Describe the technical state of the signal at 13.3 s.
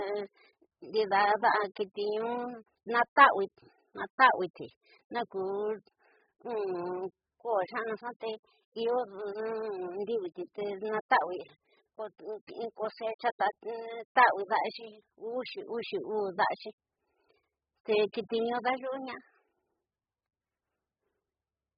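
At 13.3 s the speech carries the same damage it has throughout, likely AAC compression at a very low bitrate, consistent with about 8 kbps. Starved of bits, the encoder throws away everything above about 5 kHz and quantises the remaining bands so coarsely that gaps open in the spectrum. The sound is dull and muffled, with sibilants blurred into a fizzy smear and a watery, warbling texture on sustained sounds.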